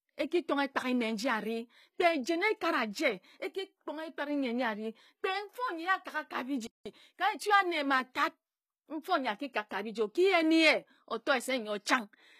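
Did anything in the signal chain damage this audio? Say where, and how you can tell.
Yes. HE-AAC compression runs through the whole clip, and the codec stage is the likely cause. The plainly audible damage sits in the treble, and nothing is present above 14.9 kHz. HE-AAC codes only the lower spectrum and synthesises the top by spectral band replication, copying lower bands upward under a coarse envelope. The rebuilt treble is not the original, so harmonics fail to line up across the crossover. This points to a low bitrate of around 20 kbps.

A playback stall runs from 6.67 to 6.86 s. The speech cuts off mid-flow into about 187 ms of silence and then resumes. This is likely a playback or buffer-stage failure: the player either ran out of data or had its output thread blocked, and nothing reached the output until it recovered. The abrupt stop in mid-flow is what distinguishes it from a natural pause in the speech.

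Time-compressed catch-up follows immediately, from 6.86 to 7.60 s. The speech is hurried to about 1.25 times normal speed but keeps its normal pitch. Having fallen behind during the stall, the player reduces its backlog by cutting out small segments and cross-fading the remaining pieces together. Because the speed-up starts the instant the silence ends and lasts under a second, it reads as the player recovering from the stall, not as the talker speeding up.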